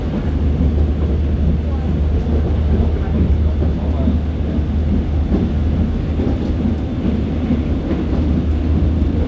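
No faults can be heard anywhere in these sounds.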